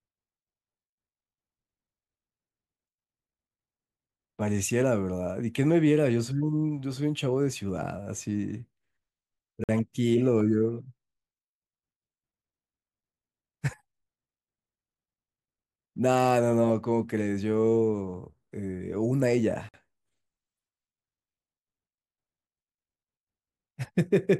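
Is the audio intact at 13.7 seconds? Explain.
Yes, at 13.7 seconds the speech plays through intact, with no dropout, click, distortion or other audible fault at that moment.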